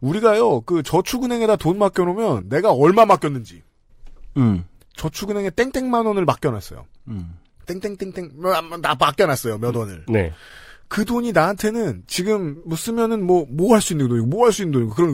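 No technical faults can be heard anywhere in this speech recording. There are no events to place on a timeline.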